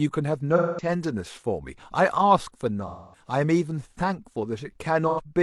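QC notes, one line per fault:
0.56–0.89 s, AAC frame loss with concealment: about 0.21 s of audio is rebuilt from the last good spectrum, consistent with five lost frames, leaving a smeared, noisy patch.
2.87–3.27 s, AAC frame loss with concealment: a gap of about 0.26 s, consistent with six lost frames, is filled with extrapolated spectral content, so the sound turns blurred and phasey.
5.09–5.20 s, AAC frame loss with concealment: a brief gap of about 85 ms, consistent with two lost frames, is papered over by the decoder, giving a short smeared blip.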